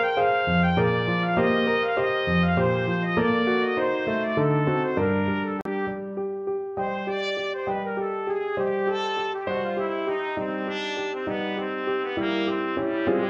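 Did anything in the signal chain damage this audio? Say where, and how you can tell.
Yes, a digital broadcast dropout at 5.61–5.66 s: the receiver muted 43 ms, fitting one lost frame, leaving a flat waveform gap and a blank vertical spectrogram stripe.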